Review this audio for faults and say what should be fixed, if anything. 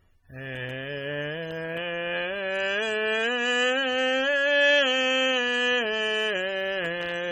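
AAC compression damage runs through the whole music clip and is plainly audible. Sustained tones carry a smeared, warbling quality, and the top end stops at about 18.6 kHz. The encoder has likely been starved of bits, which fits an AAC-LC stream at roughly 32 kbps. At that rate the hearing model leaves gaps in each frame's spectrum, and the detail that remains is quantised coarsely, so the sound turns dull and unstable. To prevent it, export from the original source at a much higher AAC bitrate, or in a lossless format, instead of re-encoding this copy.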